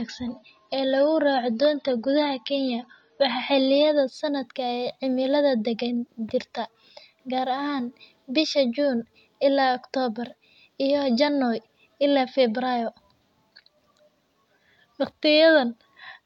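An adaptive stream starting at a low bitrate colours the first 4.0 seconds of this speech. From 0.0 to 4.0 s nothing sounds above about 6.9 kHz, so the sibilants and air are dulled and coding artefacts are more audible, which fits a 24 kbit/s AAC version chosen to start playback quickly. Once the player has gauged the connection, it switches to a richer version, consistent with 96 kbit/s, and the treble returns abruptly at 4.0 s without any gap.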